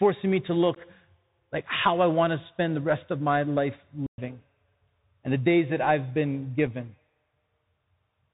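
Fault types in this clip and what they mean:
Bluetooth CVSD headset codec: The whole clip runs through the narrowband headset codec, here at 64 kbps, one bit per sample nudging the level up or down with an adapting step. Nothing above 4 kHz gets through, so the speech sounds boxed-in, and the damage is plainly audible: sibilants come out scratchy, louder bright bits smear where the step can't keep up, and there's a grainy hiss sitting under everything.
Unconcealed Bluetooth headset packet loss: Short chunks of audio between headset and phone went missing and nothing papered over them. Right after "me to" at about 0.75 s there's a 15 ms hole, roughly a few packets' worth, with hard edges. A second, tiny 3.8 ms gap lands at 6.67 s just after "days that I've been".
Digital wireless dropout: After "rest of my life", from 4.06 to 4.18 s, the link drops and the receiver just mutes for about 117 ms. 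It's a clean stretch of near silence with a very quick fade in and out, and there's no noise burst on either side. That's a receiver that stopped getting enough data and chose silence over garbage.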